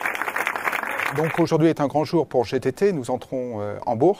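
No technical faults are audible.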